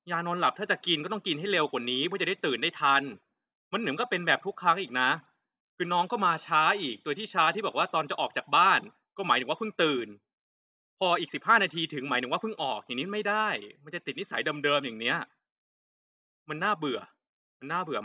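No technical faults are audible.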